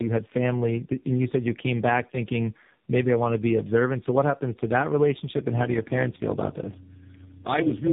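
From start to finish the speech sounds rough, muffled and warbly, with nothing above 3.8 kHz. This is tandem speech coding: the audio was decoded and re-encoded at each link, which fits three speech codecs in a row ending in AMR-NB, each compounding the last one's damage.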